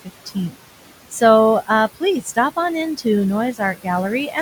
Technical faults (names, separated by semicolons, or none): noise suppressor artifacts; speech cut by the noise suppressor